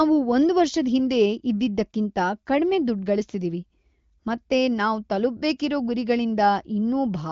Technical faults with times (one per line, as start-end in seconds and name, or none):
none